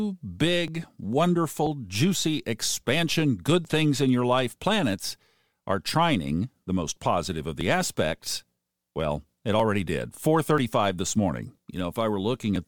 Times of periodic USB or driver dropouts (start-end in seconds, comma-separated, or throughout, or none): 0.68-12.56